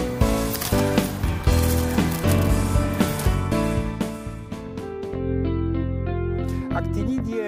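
Nothing is technically wrong with this audio clip.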